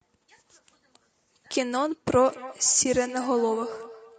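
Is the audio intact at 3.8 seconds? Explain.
No. At 3.8 s the sound falls inside a feedback echo between two devices that runs from 2.28 s to the end. A second device in the room replays the call, the first device's microphone picks it up again, and each syllable returns about every fifth of a second, up to about 15 dB below the direct sound. On a waveform, fainter copies trail each burst at that spacing; a spectrogram shows ghost repeats of each harmonic stack.

The sound at that moment is also plainly rough and grainy, likely from low-delay AAC compression (AAC-ELD) at a rate that fits about 32 kbps. Its short frames blur the pitch harmonics and leave noise between them. A spectrogram shows smeared harmonic lines, filled-in gaps between them, and a thin or patterned top band.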